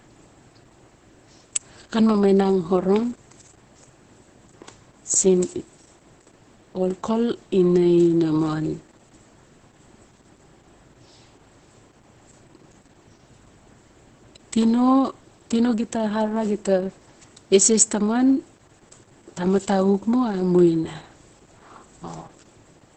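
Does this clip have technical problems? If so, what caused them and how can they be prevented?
Yes. Opus voice compression runs throughout the clip, and the damage is heavy. Nothing survives above about 8.5 kHz, which fits Opus narrowing the band to wideband, and the speech sounds muffled, hoarse and slightly robotic. That points to the SILK linear-prediction coder running at a very low rate, around 10 kbps, where the excitation is coded so coarsely that much of the voice's fine texture is lost. To prevent it, encode speech at 24 kbps or more.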